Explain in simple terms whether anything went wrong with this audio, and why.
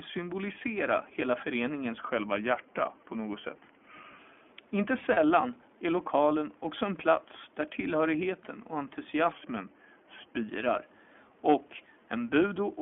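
Several things went wrong. Throughout, the speech carries the sound of the iLBC codec, a telephone-style voice codec. Everything above about 3.4 kHz and below 150 Hz is gone, so the voice sounds boxed-in, and the coding damage is plainly audible as a rough, slightly synthetic edge. It sets itself apart from a plain bandwidth limit because the roughness stays with the voice for the whole clip, not just a muffled tone.

From 1.98 s to 4.18 s the speech plays about 6% slower and drops in pitch by roughly a semitone, then returns to normal. This is most likely a drift correction step, where software keeping two clocks in step changed the playback rate all at once. It differs from a codec fault because speed and pitch move together as a block and then snap back, while the voice itself stays intact.

At 5.13 to 5.18 s there are lost iLBC frames. The gap lasts 40 ms, which fits two 20 ms frames. 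The decoder covered it by repeating the last bit of voice mixed with noise, so you hear a brief held, buzzy or breathy sound. There is no silent dropout, and the voice is right again right afterwards. The quiet room noise underneath is part of the recording.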